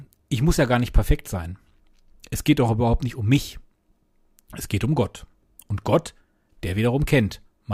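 Nothing in the audio stood out as a technical problem on listening.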